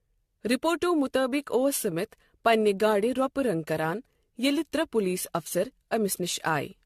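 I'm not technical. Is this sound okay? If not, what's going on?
No. From start to finish the speech sounds swirly and hollow, watery, with the starts of sounds smeared rather than crisp, and the top end stops at 14.1 kHz, so it lacks airy sparkle. This is generation loss: the audio was likely squeezed into a compressed format and re-saved around five times, and each pass added its own small damage on a slightly shifted grid, so the flaws piled up.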